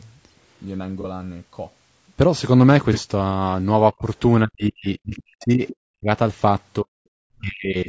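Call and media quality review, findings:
Low-delay AAC compression, whole clip: speech rough and grainy, noise filling the gaps between harmonics, top band synthetic-sounding within the 8 kHz bandwidth. Likely AAC-ELD at a rate that fits about 32 kbps. Short frames of roughly 30 ms resolve pitch harmonics poorly and spend bits inefficiently, so at this rate harmonic detail smears into noise. Damage plainly audible throughout.

AAC frame loss with concealment at 1.00–1.05 s, 2.93–2.98 s and 5.09–5.14 s: brief smeared, noisy, phasey patches, each about 30 ms, consistent with a single lost frame. The decoder rebuilds the gap from the last good spectrum with randomised signs or interpolated energy. The losses are too short to fade to silence.

Speech suppressed in double talk at 3.91–4.06 s (shallow dip, about 20 dB), 4.45–6.08 s, 6.80–6.99 s and 7.41 s to the end (deep drops, around 40 dB). 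In these spans the talker dips, thins out and cuts out in pieces. Likely the echo canceller failing to separate near-end speech from far-end loudspeaker echo and attenuating both. The longest span runs about 1.6 s.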